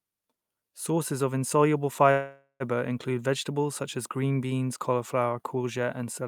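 At 2.11 s, right after "of insoluble", the speech stops and a call audio freeze takes over until 2.63 s. The last sound is stretched into a fading buzz for about half a second, then drops to a brief silence of about 70 ms. The likely cause is packets held up in transit, leaving the jitter buffer empty. When the speech resumes, it picks up where it stopped. Nothing is lost, but everything after arrives about 0.49 s later.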